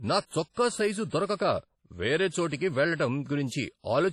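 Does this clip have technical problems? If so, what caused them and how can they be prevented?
Yes. Throughout the speech there is washy, ringing smearing with hiss that breathes with the signal and nothing above 15.2 kHz, likely WMA compression at a low bitrate, roughly 32 kbps. The noise spreads over long blocks, smearing across tens of milliseconds. Encoding at a higher bitrate prevents it.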